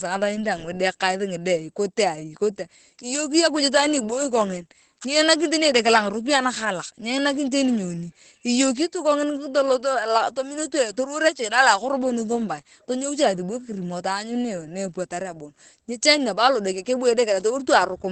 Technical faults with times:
0.00-18.11 Opus voice compression

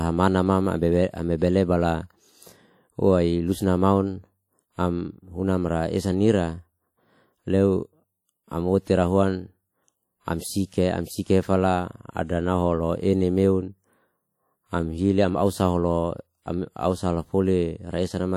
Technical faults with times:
0.00-18.37 WMA compression

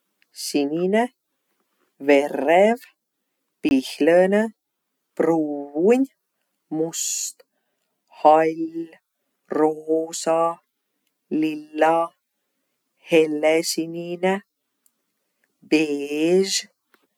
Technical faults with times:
3.69-3.71 block of digital silence

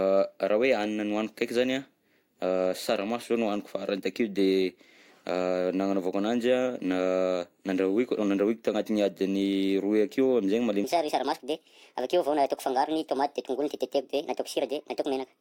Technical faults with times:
10.84-15.40 section at the wrong speed

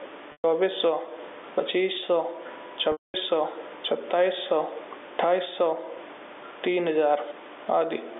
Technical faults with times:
0.00-8.20 gain pumping
0.32-0.44 packet loss with pitch repetition
2.92-3.14 packet loss with pitch repetition

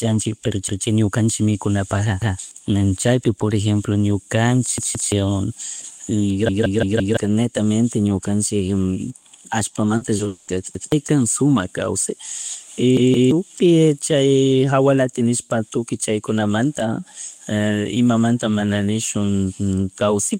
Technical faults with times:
0.68-0.85 repeated buffer
2.22-2.39 repeated buffer
4.78-5.12 repeated buffer
6.49-7.17 repeated buffer
9.97-10.49 repeated packet loss (robotic sound)
10.75-10.92 repeated buffer
12.97-13.31 repeated buffer

